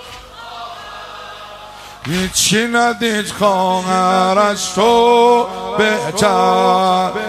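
From start to finish the sound carries video or display buzz, where a screen or video cable has leaked its scanning signals into the audio path. A coarse buzz sits at the 50 Hz field rate, roughly 30 dB below the wanted sound, with gritty hash layered above it and a whine at 15.6 kHz from the line rate. A spectrogram shows a comb of harmonics spaced 50 Hz apart and a thin steady line at 15.6 kHz, while the waveform repeats a ripple every 20 ms.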